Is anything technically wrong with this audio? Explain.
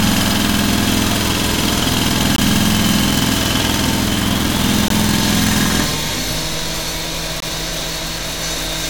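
Yes, there is a gap between chunks: 20 ms silences at 2.36–2.38, 4.88–4.90 and 7.40–7.42 s, every 2.5 s, where silence is left between chunks and nothing is lost. They sound like clipped holes, and appear as thin vertical blank stripes in the spectrogram and flat near-silent stretches in the waveform.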